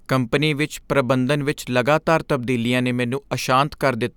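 Nothing in the speech stood out on listening.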